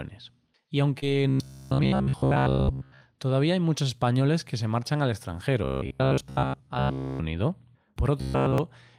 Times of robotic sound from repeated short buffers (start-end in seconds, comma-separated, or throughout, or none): 1.29-3.02, 5.64-7.21, 8.18-8.58